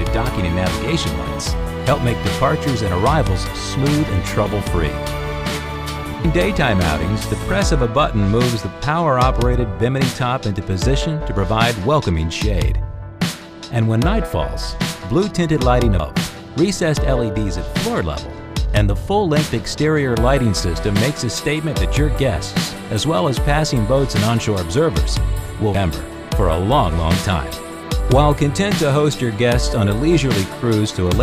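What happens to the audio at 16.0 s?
Audio missing between chunks, at 16.0 s: the sound jumps forward abruptly, with about a third of a second gone and the material on either side butted together with no gap of silence. The likely cause is a recorder or processor working in 10-second blocks that dropped a short stretch while closing one block and starting the next, so the join falls near a block boundary and the lost span simply never reached the file.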